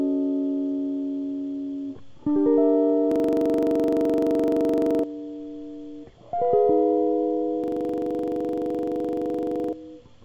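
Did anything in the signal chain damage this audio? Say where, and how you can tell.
Yes. A system hang loop at the driver or buffer stage hits this music from 3.12 to 5.04 s and from 7.64 to 9.73 s. In each, a 42.67 ms fragment repeats as a 23.4 Hz stutter, fitting a 2048-sample ring buffer replayed while the host stalled, with about two seconds of music lost each time.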